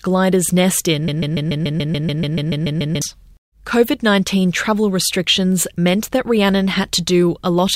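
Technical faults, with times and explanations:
1.08–3.02 s, broken-record loop: one 144 ms slice repeats 13 times, likely a stall resending its last fragment, so the real speech there is lost.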